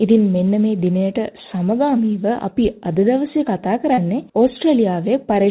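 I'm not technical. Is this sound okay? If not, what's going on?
No. At 3.94 to 3.99 s there is a short concealed packet loss: about 40 ms of the call arrived too late, so the receiver patched the gap by stretching the preceding sound for roughly 33 ms, leaving a brief smear or blip before the real audio resumes. The muffled, telephone-like tone throughout comes from the call's codec, which keeps nothing above 4 kHz.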